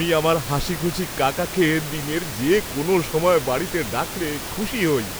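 No technical faults are audible in this speech.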